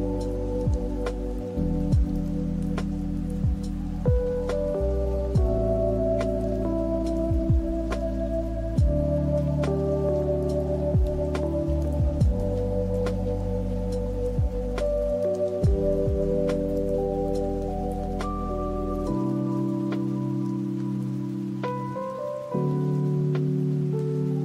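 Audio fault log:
No faults can be heard anywhere in this audio.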